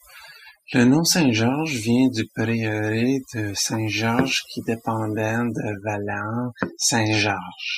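From start to finish the speech carries overdone noise removal. A noise reducer applied far too aggressively is pulling individual frequency bands down or out whenever their level sits near its noise estimate, and the quieter components of the voice are caught along with the noise. The background drops away and breaks up into twinkling, chirpy specks.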